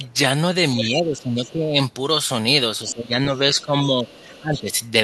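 From 0.81 to 1.5 s the echo canceller has likely failed to remove the far end's loudspeaker sound from the microphone, so the other side's voice leaks through. It sits only about 10 dB under the talker. Over the same double-talk stretch, 0.81 to 1.77 s, the canceller likely misjudged the overlap as echo and pulled the whole signal down. The speech is suppressed in double talk, dropping by as much as about 15 dB for roughly a second.

The same speech suppression in double talk returns from 2.85 to 4.73 s. The talker's level again sinks by up to about 15 dB, intermittently, across roughly one and a half seconds. Within that stretch the other side's voice leaks through more faintly: a brief scrap at 2.88 to 2.93 s and another at 3.36 to 3.63 s, both about 25 dB down, then a longer one from 4.08 to 4.6 s at about 20 dB down.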